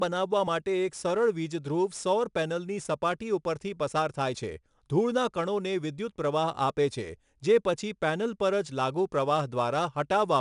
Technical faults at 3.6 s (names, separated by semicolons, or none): 4-bit ADPCM compression